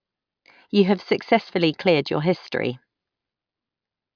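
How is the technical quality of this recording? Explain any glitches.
The technical quality of this recording is sound, with no glitches to explain.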